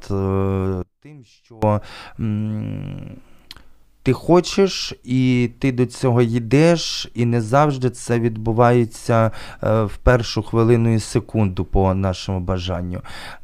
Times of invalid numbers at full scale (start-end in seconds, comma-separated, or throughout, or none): none